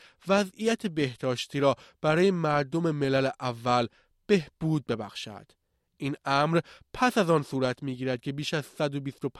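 There are no technical faults to describe in this speech clip, so there is nothing to place in time order.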